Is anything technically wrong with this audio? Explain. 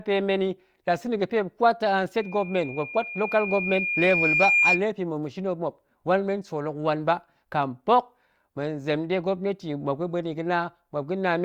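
Yes. Loudspeaker feedback squeal runs from 2.17 to 4.83 s. The microphone picks up its own loudspeaker, and at 2.4 kHz the loop gain exceeds one. A piercing tone swells over roughly two seconds to about 5 dB above the speech. A spectrogram shows this as a brightening horizontal line at 2.4 kHz.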